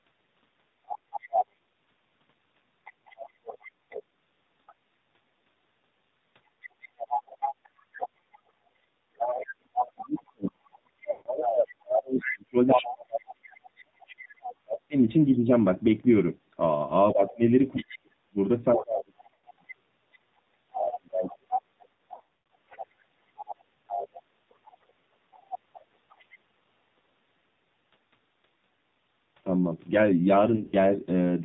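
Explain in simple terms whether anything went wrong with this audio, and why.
AMR narrowband mobile codec, throughout: the call squeezes the sound into a phone-grade model that removes everything above 4 kHz, leaving it muffled, buzzy and synthetic.

Other side's voice leaking through, 0.88–4.73 s, 6.62–14.55 s and 17.3–26.37 s: a second voice sits underneath, faint at first and much closer to the main level in the middle stretch, likely because the echo canceller failed to remove the loudspeaker sound.

Speech suppressed in double talk, 9.23–15.5 s and 17.13–21.76 s: the main sound repeatedly sinks, sometimes almost to nothing, likely because the echo canceller turned everything down while both sides talked.

Lost AMR speech frames, at 11.12–11.29 s, 19.34–19.43 s, 21.94–22.50 s (in scattered bursts) and 30.56–30.75 s: radio errors ruined chunks of data, so the decoder stretched and faded the last good sound, causing brief smears and dropouts.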